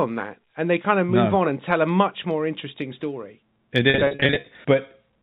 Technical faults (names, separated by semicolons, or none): packet loss with pitch repetition